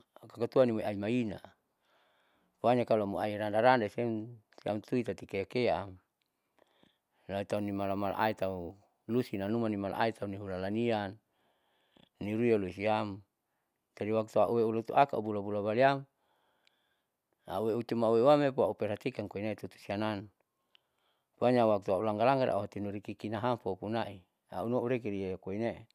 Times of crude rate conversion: 7.57-9.49

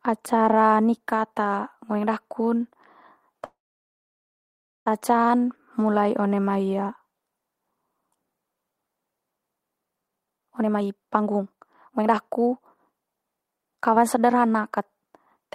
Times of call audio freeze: 3.45-4.88

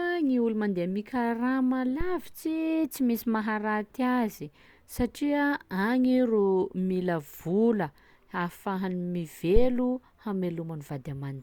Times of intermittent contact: none

